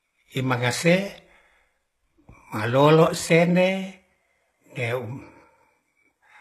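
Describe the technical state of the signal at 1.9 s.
At 1.9 s the speech carries plainly audible HE-AAC compression, likely, running throughout: gritty, lispy treble rebuilt from copied lower bands, with a hard spectrogram ceiling near 12.3 kHz.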